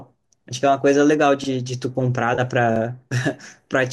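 Speech, with two quick stutters from a repeated buffer at 1.44–1.48 s and 2.76–2.80 s, where a 40 ms chunk plays twice with a hard join, though apparently nothing gets skipped. In between, at 2.35–2.40 s, there's a brief smeared, slightly noisy patch from AAC frame loss with concealment: about 30 ms went missing, which fits three 10 ms frames, and the decoder patched it from the last good spectrum. The faint graininess underneath is likely from low-delay AAC compression at a fairly healthy rate.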